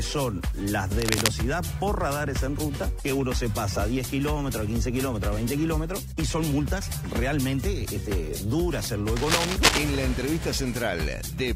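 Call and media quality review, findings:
Cable scratch noise, two bursts: 0.99 to 1.28 s, then a longer one 9.16 to 9.83 s. Dense, uneven scratchy rustle riding over the sound, roughly as loud as the sound itself. Likely a worn cable or connector getting moved, with contact resistance jumping around and spraying noise into the signal. Worth wiggle-testing the leads and jacks, and swapping the cable.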